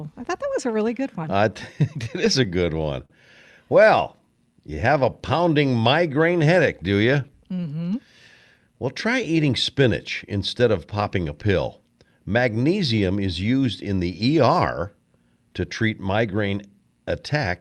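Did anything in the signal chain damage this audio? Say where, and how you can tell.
Yes, the damage is at the network and jitter-buffer stage of the call path.

Repeated stalls (stutter) run from 2.04 to 3.12 s: six brief hitches, the longest about 44 ms, adding up to roughly 98 ms of filled-in sound, about 9% of that stretch. Packets arrived late, the buffer ran dry, and the receiver extended the last sound each time rather than dropping anything. On a waveform you would see short smeared, repeated cycles; a spectrogram shows harmonics briefly frozen flat.

A jitter buffer slow-down follows from 3.97 to 4.95 s. The audio plays at 95% speed with unchanged pitch, stretched by 59 ms as the receiver repeated single pitch periods to rebuild its reserve. This is a buffer-management action, not a codec fault. A spectrogram shows harmonic tracks slightly elongated at constant spacing, and the waveform shows near-identical periods duplicated in runs, giving a drawn-out quality.

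A jitter buffer speed-up comes right after "migraine headache do you", from 7.52 to 7.96 s, running at 111% speed as the receiver trimmed about 50 ms of pitch periods to shed excess delay. Pitch stays put but the phrase sounds hurried. In the waveform, periods are visibly dropped at splice points, and the spectrogram shows compressed syllable timing while the codec's band edge near 12 kHz holds steady.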